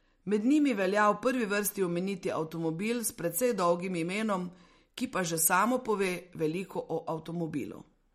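From start to finish the speech carries plainly audible MP3 compression damage, likely from a low-bitrate encode around 48 kbps. Nothing survives above 15.9 kHz. Weak frequency lines flicker between frames, giving a watery, swirly texture, with metallic chirps on s sounds and smeared attacks.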